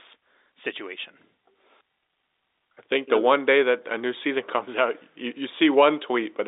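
Nothing goes wrong in this one; it's just the ordinary narrow sound of a G.711 telephone line, with the speech held to roughly 300 Hz to 3.7 kHz.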